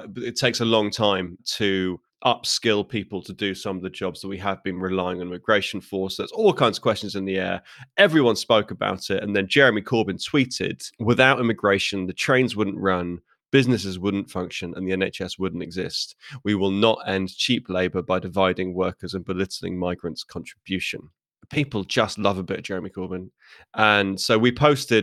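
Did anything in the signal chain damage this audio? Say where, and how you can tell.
No, nothing audible in this speech points to damage at any stage of the chain, so there is nothing to localise.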